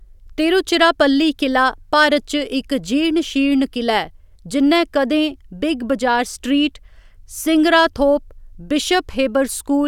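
No audible technical faults.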